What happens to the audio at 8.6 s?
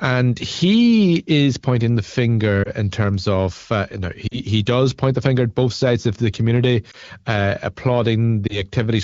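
A brief dip or warble between 8.47 and 8.63 s: one lost AMR speech frame, about 20 ms, concealed by the AMR-WB decoder repeating earlier settings with reduced gain.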